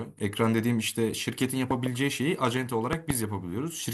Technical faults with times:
1.71-1.88 loud pop
2.93-3.12 loud pop

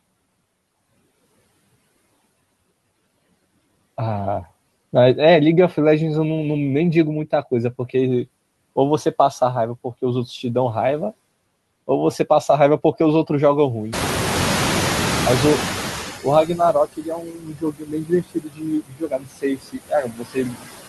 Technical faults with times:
0.00-20.89 noise suppressor artifacts
13.92-16.81 noise suppressor catching up
16.46-20.65 speech cut by the noise suppressor

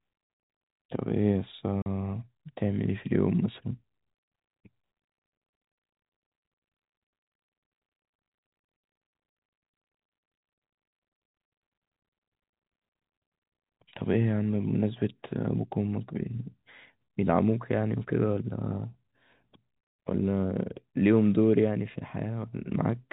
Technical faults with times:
1.82-1.86 packet loss filled with silence
15.72 bit error spike

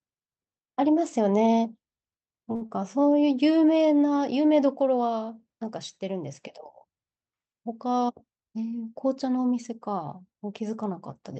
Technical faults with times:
2.55-2.62 short stall from a late packet
2.66-2.70 short concealed packet loss
7.85-8.55 jitter buffer speed-up

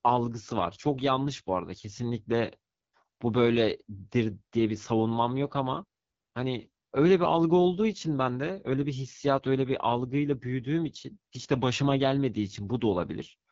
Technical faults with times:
0.00-13.51 AMR wideband (HD Voice) codec

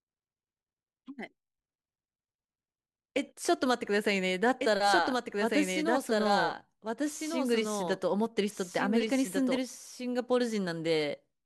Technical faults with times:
4.61-9.57 doubled audio track

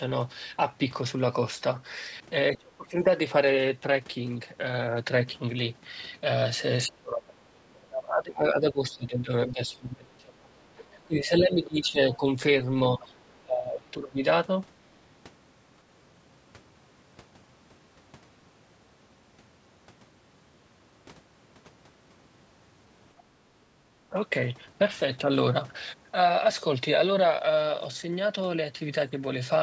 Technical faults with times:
2.56-2.97 speech suppressed in double talk
6.86-12.25 speech suppressed in double talk
12.12-12.17 other side's voice leaking through
12.99-14.20 speech suppressed in double talk
13.00-13.05 other side's voice leaking through

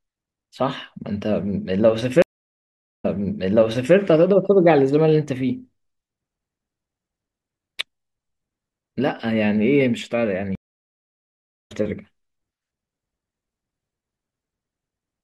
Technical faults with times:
2.22-3.95 stream reconnect
10.55-11.72 stream reconnect

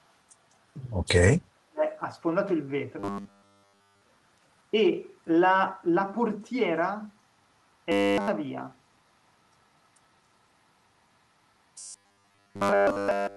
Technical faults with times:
1.25-1.83 speech suppressed in double talk
2.99-4.01 robotic sound from repeated short buffers
7.92-8.28 robotic sound from repeated short buffers
11.78-13.36 robotic sound from repeated short buffers

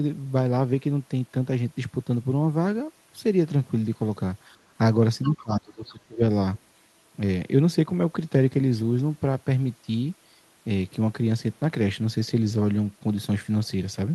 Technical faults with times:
5.22-5.43 other side's voice leaking through
5.29-6.22 speech suppressed in double talk
6.55-6.59 other side's voice leaking through

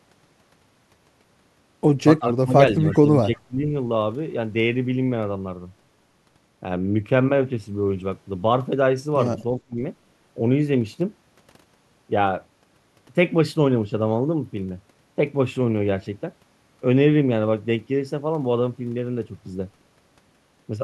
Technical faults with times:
2.19-3.70 speech suppressed in double talk
9.59-9.77 speech suppressed in double talk

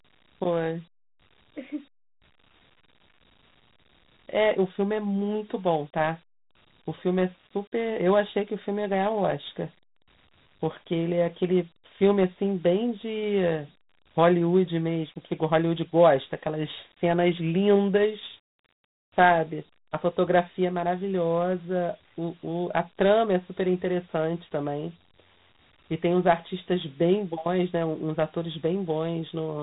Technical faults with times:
0.00-29.63 Dialogic VOX ADPCM

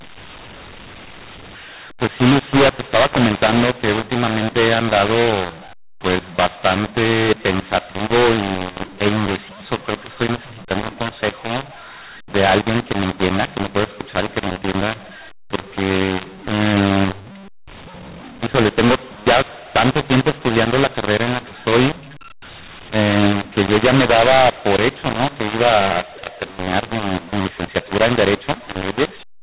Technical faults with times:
0.00-29.43 mu-law and A-law mixed up

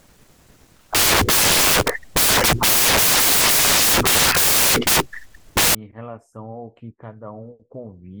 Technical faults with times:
0.00-5.75 samples built from the wrong bytes

